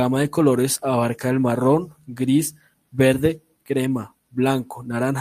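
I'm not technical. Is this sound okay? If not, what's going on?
Yes, this sounds fine.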